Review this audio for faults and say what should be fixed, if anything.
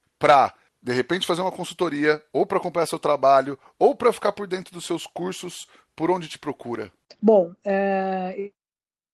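Nothing stood out on listening to this speech, so there is nothing here to fix.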